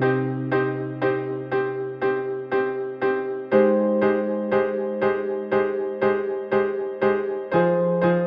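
There are no technical faults to describe at any point in this music.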